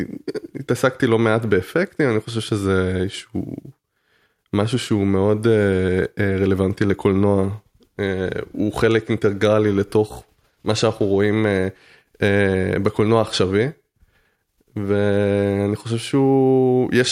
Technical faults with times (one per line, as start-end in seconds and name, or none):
none